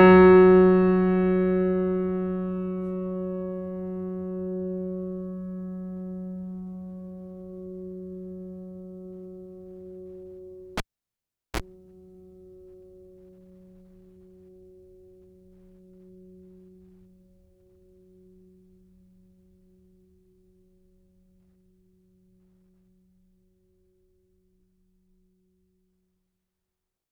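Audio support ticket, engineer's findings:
Cable pulled and plugged in, 10.77–11.60 s: pop, 0.77 s near silence, 33 ms of 60 Hz buzz from a tip-only contact, pop on return. The buzz separates it from a digital dropout.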